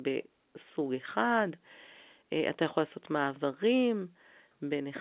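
The clip is speech carried over A-law G.711 telephone coding, and nothing is technically wrong with it.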